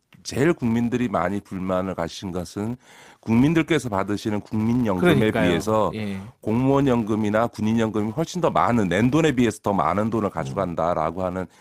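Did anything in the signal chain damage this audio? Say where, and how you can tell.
Yes. The damage is in the call processing stage, where a filter is restarted on every block. A steady buzz at 200 Hz runs under the speech for the whole clip. It rises and falls with the speech level, so it is not hum from the wiring. Each block starts the filter from silence, which leaves a small transient at every block boundary. A tick rate of 200 per second points to blocks of about 5 ms.

There is also clock drift between sender and receiver, on the network side. The sender's clock runs slow, by roughly one and a half percent. The receiver's jitter buffer keeps draining as a result. The receiver cannot wait, so it has to pad the stream to stay fed. The evidence is small timing hiccups at uneven intervals across the clip.

Those hiccups are repeated timing corrections, from 0.42 s to 11.33 s. The receiver repeats short pieces of audio to make up for the slow sender. 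Every edit goes the same way, so the speech plays at about 98% of its natural pace. Over that stretch the repeats add roughly a fifth of a second. No single edit stands out.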